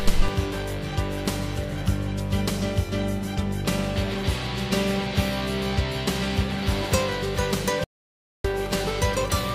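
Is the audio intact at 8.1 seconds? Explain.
No, 8.1 s falls inside an audio dropout to silence running from 7.84 to 8.44 s, about 0.6 s of silence with no room tone. The input was likely lost briefly while recording kept going, so the sound just cuts out, then resumes abruptly.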